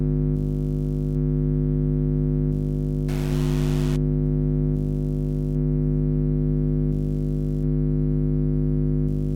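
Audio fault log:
3.09 to 3.96 s, stuck bit: for just under a second the sound turns harsh and buzzy, a distortion riding on everything. The likely cause is one data bit held fixed by a faulty line or converter, so about half the samples are shifted by that bit's weight, a step of around -30 dBFS, in a pattern set by the waveform. Because the error flips with the sign of small values, even near-silent moments become noisy.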